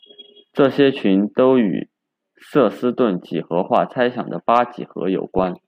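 From 5.38 to 5.45 s, DAB burbling: bit errors at a fraction of a percent slipped past error correction into MP2 data, so corrupted samples put short blips of noise into single sub-bands. The result is brief burbling over speech, not the silent gap of a dropout.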